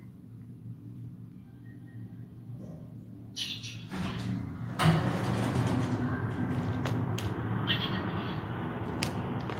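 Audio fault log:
No fault is logged for this audio.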